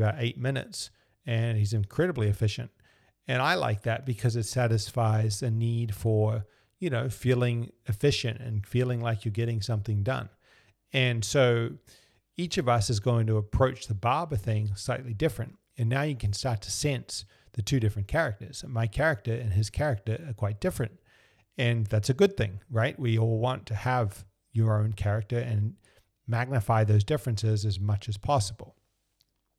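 Nothing stands out here: the speech runs along with no dropouts, glitches or other technical trouble to point to at any moment.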